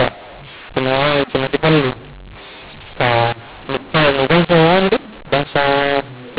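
Throughout, mu-law and A-law are mixed up: mu-law samples decoded as A-law scramble levels, giving harsh distorted speech, noise-filled pauses, and a waveform with lifted silent stretches.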